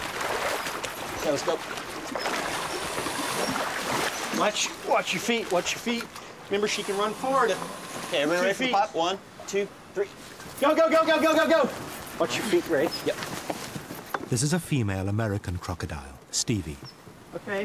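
No technical faults are audible.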